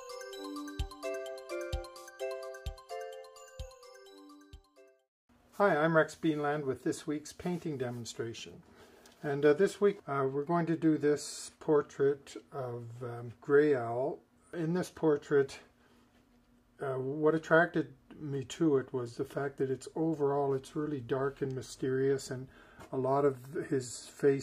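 No technical faults are audible.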